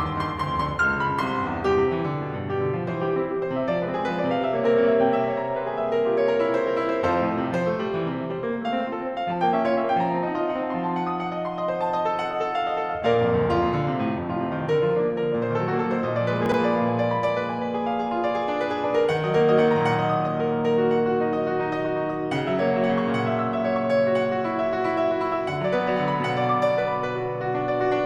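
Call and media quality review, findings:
Chunks out of order at 16.46 to 16.54 s in the music. Brief jumbled stutter. One 20 ms chunk plays three chunks late, after audio meant to follow it. Nothing dropped, sequence broken, three hard splices. Probable component: jitter buffer or write path reordering late-arriving audio.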